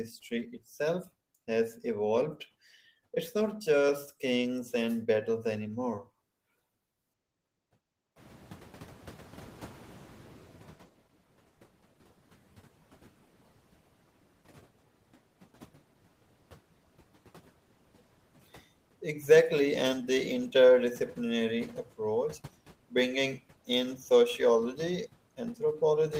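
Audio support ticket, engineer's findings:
Noise suppressor catching up, 8.16–10.92 s. Room noise steps up by about 20 dB around 8 s; suppressor's noise estimate lags, so the new noise passes with little reduction, then sinks by about 10 dB over 2.76 s as the estimate adapts. Spectrogram: broadband noise floor jumps, then fades toward about 23 dB below speech. Waveform: thick noise band between syllables, tapering. Component: noise suppression, estimator adaptation rate.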